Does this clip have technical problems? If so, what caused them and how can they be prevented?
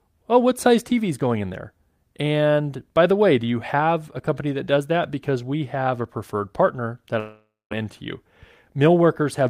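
Yes. From 7.19 to 7.73 s there is a long network dropout, most likely the incoming audio stream stalling so that about 0.52 s of speech never reached the player. The receiver tried to cover the gap by stretching the last sound for roughly half a second, which comes across as a fading buzz, and about 0.21 s of that is near-silence before the speech resumes with the missing part gone. A larger jitter buffer with redundant packet coding would help prevent this.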